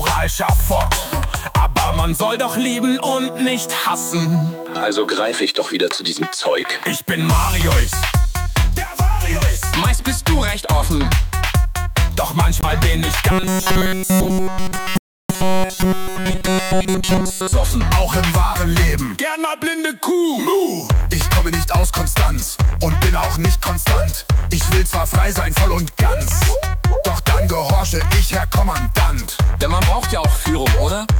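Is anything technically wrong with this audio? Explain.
Yes, there are two kinds of fault. The first is a Bluetooth dropout, at 12.61 to 12.65 s and again at 14.98 to 15.32 s. Packets likely arrived at the headphones too late and were discarded, so the output cuts to silence for about 21 ms and then about 320 ms. The sound picks up further along, as if it had kept playing.

The second is robotic sound from repeated short buffers, from 13.31 to 17.53 s. Fresh audio is likely arriving too rarely, so playback loops a tiny slice of about 5.3 ms throughout this stretch. That imposes a fixed 188 Hz buzz, giving a rigid metallic tone that only loosely tracks the underlying sound.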